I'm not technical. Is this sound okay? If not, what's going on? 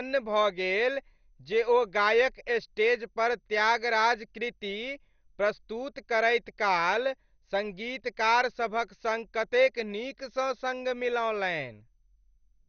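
No, not quite. All the way through, the speech sounds muffled and plainly gurgly, with a grainy, bubbling edge on the sounds. Nothing comes through above 6.5 kHz, so the crisp top end is gone. That's likely MP2 compression squeezed too hard: the format splits the sound into slices and, short on space, drops the upper ones entirely and stores the rest roughly. It's the same watery dullness you get from weak digital radio.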